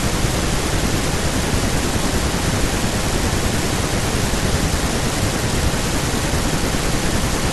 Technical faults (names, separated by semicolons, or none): none